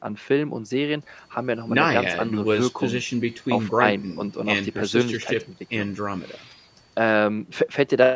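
Nothing stood out on listening to this speech, which carries the ordinary sound of a call's microphone processing with no content above 8 kHz.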